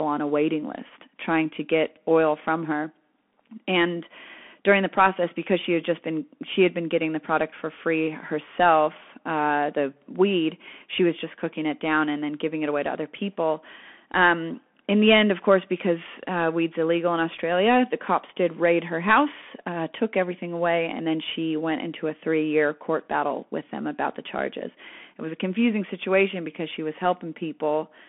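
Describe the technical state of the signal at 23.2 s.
At 23.2 s the speech carries the Bluetooth CVSD headset codec, present throughout. The band runs about 200 Hz to 3.4 kHz, with nothing above 3.8 kHz. One-bit up-down coding with an adaptive step leaves plainly audible granular damage, which fits a 64 kbps CVSD link.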